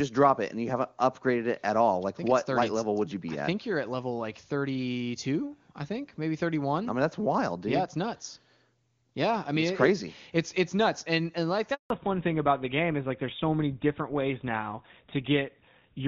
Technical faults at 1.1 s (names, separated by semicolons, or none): none